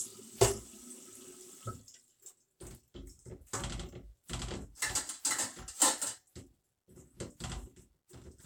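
No technical faults can be heard in this audio.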